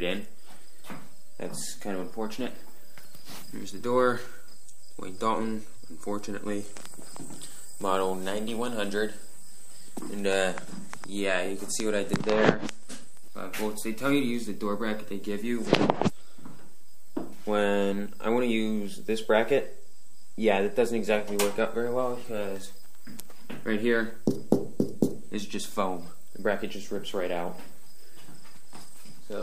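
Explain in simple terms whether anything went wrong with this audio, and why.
DC offset runs from the very start to the end. The whole waveform sits shifted slightly away from its centre line. You can't hear it directly, but it wastes some of the room the signal has before clipping, and shows up as steady energy at the lowest frequencies.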